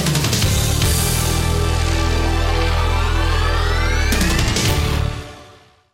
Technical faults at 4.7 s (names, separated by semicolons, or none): hard clipping